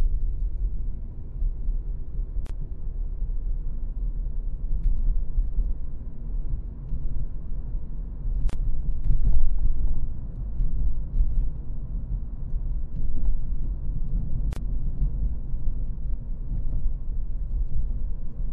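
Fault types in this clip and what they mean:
MP3 compression: A watery, swirling quality runs through the whole sound, with metallic chirps on bright, noisy content and softened attacks. The cause is likely MP3 encoding at a low bitrate around 64 kbps, where weak frequency lines are dropped and return frame by frame. A fixed treble cut-off with swirling artefacts marks it as MP3 rather than plain low-pass filtering or added noise.
Gap at a join of encoded pieces: Short silences open in continuous sound at 2.47 to 2.50 s, 8.50 to 8.53 s and 14.53 to 14.56 s, each about 30 to 34 ms long and spaced 6 s apart. Separately encoded segments were joined with each encoder's start-up delay and final-frame padding left in. The sound resumes where it stopped, and the regular 6 s spacing sets it apart from random network dropouts.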